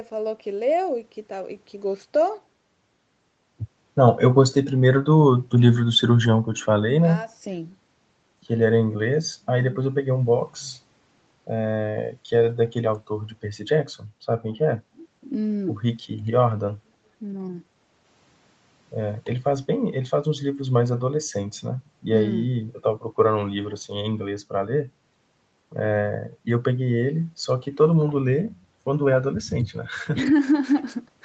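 Nothing stood out on listening; the speech keeps the narrowed top end of a call path, with no content above about 8 kHz, and that is normal for this route.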